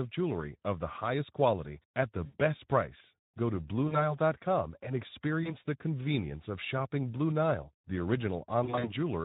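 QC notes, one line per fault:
Throughout, Speex codec. The speech sounds hoarse and noisy. Too few bits go to the excitation signal, so detail turns grainy. Any band above 4 kHz is only shaped noise. This fits a setting near 11 kbps.
2.25–2.36 s, 3.87–4.16 s, 5.43–5.57 s, 8.63–8.93 s, VoIP packet loss concealed by the speech codec. About 80, 40, 20 and 120 ms of audio are missing. The first gap follows "highest quality at the" and the third precedes "the convenience of shopping". In the last, the losses are scattered over 200 ms, with runs of up to 40 ms. The decoder stretches its last pitch and filter into a fading buzzy tone or coloured noise. The sound stays weak briefly after each gap.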